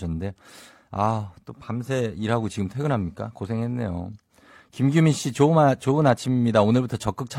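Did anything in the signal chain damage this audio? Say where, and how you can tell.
Yes. At 6.17 s the speech jumps with a small skip, losing 32 ms up to 6.20 s. This is an overlap between stream segments at the network stage: 2-second segments had overlapping time stamps, so the player discarded sound that was never duplicated.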